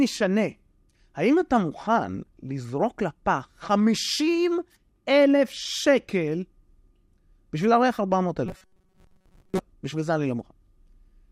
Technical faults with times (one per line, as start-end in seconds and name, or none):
8.46-9.59 robotic sound from repeated short buffers